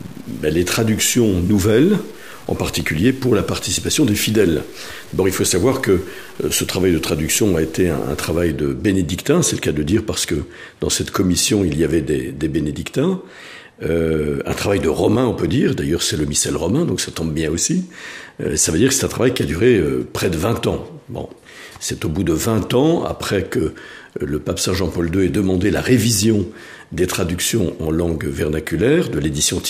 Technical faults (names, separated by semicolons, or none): low bit depth without dither